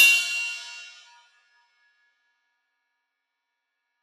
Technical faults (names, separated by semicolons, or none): sound cut by the noise suppressor